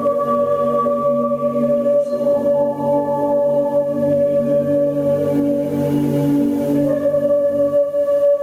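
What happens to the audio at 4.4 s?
At 4.4 s the music shows gain pumping, present throughout: the level swings around 15 dB, with loud and soft parts pulled closer together and the sound squashed, likely from excessive gain hitting a fast limiter.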